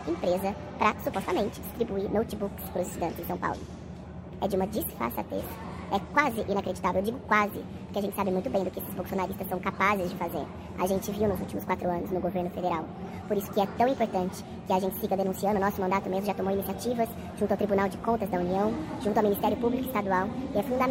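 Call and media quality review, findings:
Wrong sample rate, throughout: audio runs 1.5 times fast and about 7 semitones high, which fits 32 kHz material played at 48 kHz without conversion in the playback path.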